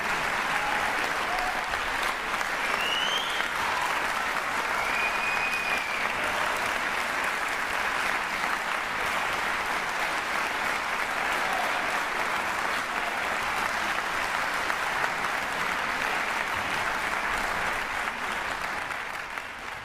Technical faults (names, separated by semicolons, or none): skip ahead; jitter buffer speed-up